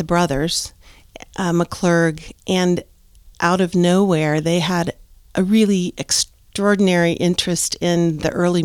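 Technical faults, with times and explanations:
No technical faults turn up anywhere in this speech recording, so there's nothing to flag here.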